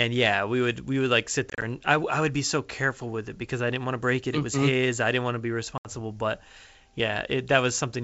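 Packet loss on an ADPCM call occurs at 1.50 to 1.64 s, with gaps totalling 70 ms and none longer than 30 ms, then at 5.78 to 5.88 s. Each hole is hard-edged silence. The decoder's predictor and step size lose track of the sender's, so sound resumes with some distortion before settling.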